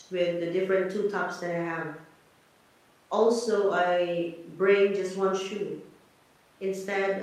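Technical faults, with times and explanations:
No technical faults are audible.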